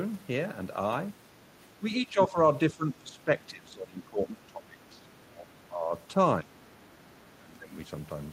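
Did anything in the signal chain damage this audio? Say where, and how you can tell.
Yes. The speech repeatedly ducks, sinking by about 10 to 20 dB, at 1.79–2.37 s, 2.71–5.08 s (the longest stretch), 5.26–5.51 s, 5.69–5.93 s, 6.43–6.59 s and 7.41–7.73 s. This is speech suppressed in double talk, and the likely cause is in call processing: with both ends talking at once, the echo canceller couldn't tell this talker from the loudspeaker echo and turned everything down.

A faint second voice can be heard at 4.94–5.06 s, very quiet and far below the main speech. This is the other side's voice leaking through, again at the call-processing stage. The far end likely played from the loudspeaker and returned through the microphone, and the echo canceller didn't remove all of it. It arrives just as the long suppressed stretch ends, when that side was still talking.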